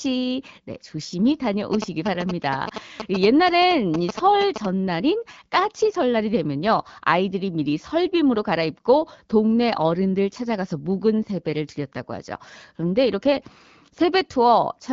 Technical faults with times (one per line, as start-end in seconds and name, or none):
1.73-4.66 GSM signalling bursts